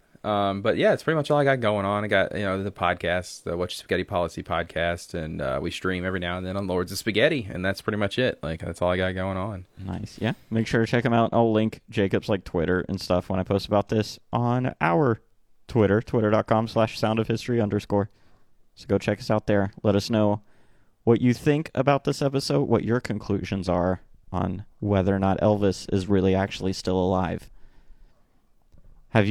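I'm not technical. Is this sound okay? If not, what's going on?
Yes, nothing here sounds wrong, so you can relax about it.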